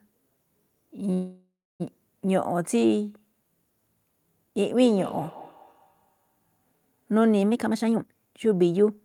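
A call audio freeze runs from 1.13 to 1.82 s. The sound stops and is filled by a fading continuation of the last moment, about 0.29 s of which is silence. Speech then resumes exactly where it left off, with nothing lost. The likely cause is packets held up in transit, so the jitter buffer ran dry and about 0.66 s of delay was added.

Feedback echo between two devices appears from 4.76 to 6.68 s. The speech returns at an interval of around a fifth of a second, peaking about 18 dB below the direct sound and growing thinner and more ringing with each pass. A second device in the room is replaying this stream, and the microphone is picking it up again. Neither device's echo canceller can remove sound played by the other.

A jitter buffer speed-up runs from 7.51 to 8.97 s. The speech plays at 142% speed without any change in pitch, so it sounds hurried. The receiver was holding too much audio and shed roughly 0.7 s of it by repeatedly cutting out tiny pitch-period slices.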